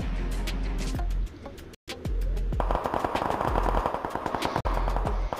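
At 1.75 s the sound cuts out and stays silent until 1.89 s. A second, shorter hole opens at 4.61 s and closes at 4.66 s. Both are likely a Bluetooth dropout. Packets reached the headphones too late and were discarded, so output went silent. The first gap loses about 128 ms of audio, the second about 43 ms. Each time, the sound resumes further along, as if it had kept playing.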